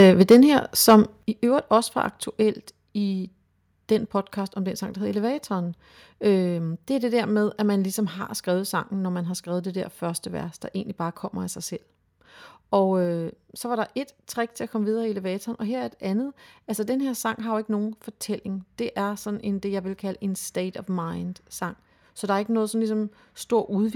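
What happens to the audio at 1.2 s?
At 1.23 s there's a microphone volume stepped down event. The speech and background drop by about 8 dB in one step, right before "i øvrigt også var". That's most likely the call software deciding the mic was too hot and cutting the device's input volume.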